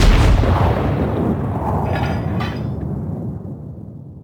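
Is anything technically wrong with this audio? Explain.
Yes. Sample clock jitter runs throughout the clip. The converter's clock wanders by roughly 7 microseconds, so each sample is taken a little early or late at random. The resulting error is largest where the waveform changes fastest, and here it sits around 35 dB below the signal. It comes across as a fine hiss or grit riding on the sound, strongest on loud and bright passages and vanishing in silence.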